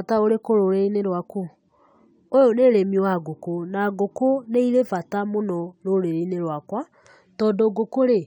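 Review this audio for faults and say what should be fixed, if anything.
No faults found; nothing here needs fixing.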